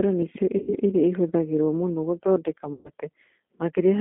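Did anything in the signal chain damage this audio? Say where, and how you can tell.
Yes. At the codec stage, G.729 coding runs throughout. The band stops at 200 Hz and 3.5 kHz, and the speech sounds rough and synthetic, which fits an 8 kbit/s model.

At the network stage there is VoIP packet loss concealed by the speech codec. It happens at 0.58–0.76 s after "nĩ cio" and at 2.73–2.91 s after "iria ihũthagĩrũo mũno gũthondeka". Each time, the decoder extrapolates from the last pitch and filter, stretching the sound into a buzzy tone or coloured noise that fades.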